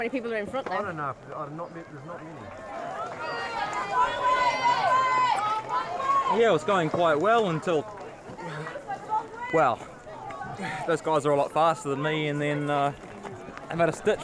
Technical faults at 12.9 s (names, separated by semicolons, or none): none